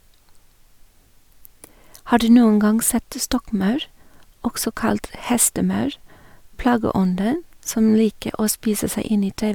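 No technical faults can be heard anywhere in the speech.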